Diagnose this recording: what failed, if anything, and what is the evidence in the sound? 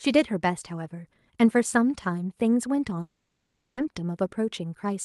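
Long network dropout, 3.01 to 3.79 s, network stage. The speech breaks off and the receiver stretches the last sound into a fading buzz for about 0.76 s, then brief silence. Speech resumes without the lost stretch, likely from packets lost in transit.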